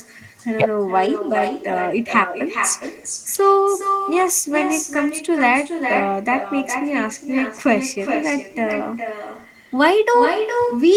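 Right through the speech there's echo with no canceller. A quieter copy, about 7 dB down, trails every phrase by roughly 0.4 s, fed back from a far-end loudspeaker.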